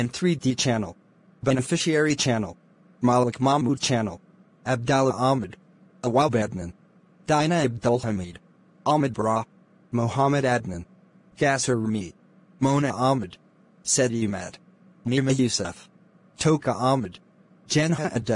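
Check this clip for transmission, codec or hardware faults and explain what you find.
No faults detected.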